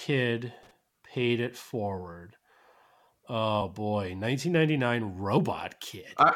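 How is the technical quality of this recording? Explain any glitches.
The recording has three glitches: a burst of loose connector crackle near the start, and two places where compressed frames were skipped later on.

From 0.63 to 0.71 s, a worn contact makes and breaks, chopping the signal into irregular scratchy crackle, rougher and less regular than a single dropout blip.

At 3.60 s and again from 5.37 to 5.39 s, compressed frames are skipped. The audio jumps ahead roughly 50 ms, about two frames, which fits a 23.2 ms frame length.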